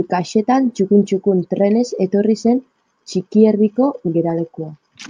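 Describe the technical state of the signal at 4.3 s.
No fault is audible at 4.3 s, and the speech signal is intact at that moment.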